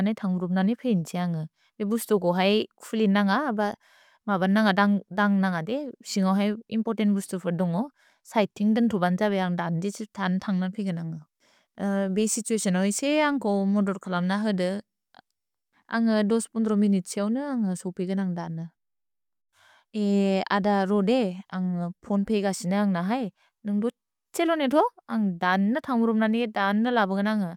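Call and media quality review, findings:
Nothing stood out on listening to the speech; no findings to log.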